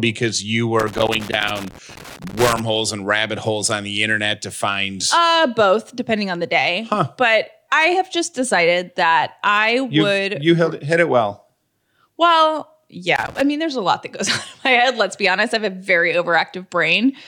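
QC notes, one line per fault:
0.80–2.60 s, loose connector crackle: irregular scratchy bursts before "and rabbit holes on", from a worn or dirty contact intermittently breaking and chopping the signal.
13.16–13.41 s, loose connector crackle: a brief burst of crackle and scratching ahead of "mean there's a lot", as the unstable contact briefly interrupts the line again.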